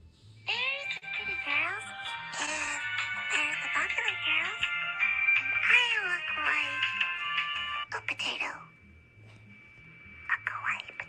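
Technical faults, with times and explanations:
0.97 to 1.05 s, short stall from a late packet: one packet turned up late, the jitter buffer ran dry, and the receiver held on to the last bit of sound for about 46 ms to cover the gap. Nothing actually gets lost, since playback resumes right where it stopped, but you hear that moment stretched a touch too long with a faint buzzy, slightly dipped quality, and everything after it lands about 46 ms later.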